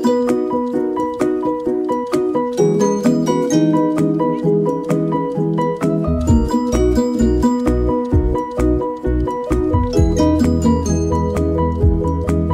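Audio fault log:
Nothing to flag here: the audio runs along without a single problem worth noting.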